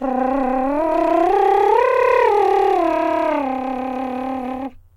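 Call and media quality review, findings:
No faults found: no dropouts, distortion or timing irregularities anywhere in the music signal.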